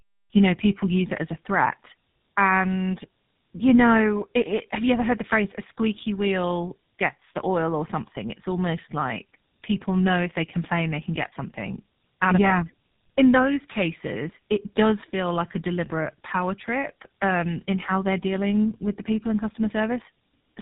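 From start to finish the speech carries tandem speech coding: it sounds like AMR-NB decoded, passed over a G.711 hop, then re-encoded as GSM full rate. The second coder works on the first one's damage, so it's rough, muffled and warbly, with nothing above 3.8 kHz.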